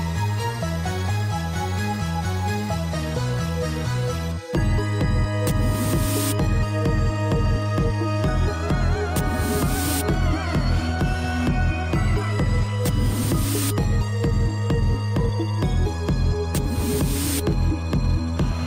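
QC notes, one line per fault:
No faults found; nothing to log.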